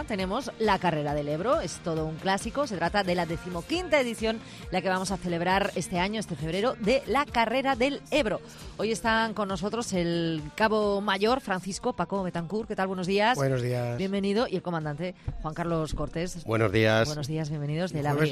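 No technical faults can be heard anywhere in this clip. The audio carries on without interruption from its opening moment to its last.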